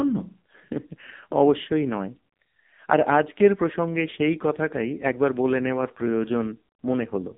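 The clip is speech, and the AMR narrowband mobile codec has damaged it from start to finish. Nothing is heard above about 3.8 kHz. The usable band runs from about 150 Hz to 3.7 kHz, so the sound is thin and boxy. The codec damage is heavy. The voice comes out buzzy and synthetic, which fits a low AMR-NB mode of about 5.9 kbps. At that rate, too few pulses drive the vocal-tract model in each frame.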